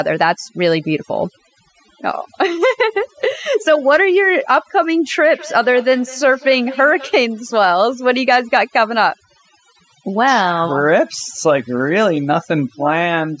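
A speech recording suffers from overdone noise removal from start to finish. The suppressor was set too aggressively, so individual frequency bands near its noise estimate are pulled far down or muted, taking quiet parts of the voice with them. The background drops and breaks up into twinkling specks. From 5.34 to 7.23 s a feedback echo between two devices appears. A second device on the same call replays the far-end audio into a nearby microphone, and that device's echo canceller cannot remove sound it did not play itself. The sound returns at roughly 200 ms intervals, peaking at about 18 dB below the speech and sounding thinner and more ringing than the original. The call's microphone processing leaves nothing above 8 kHz.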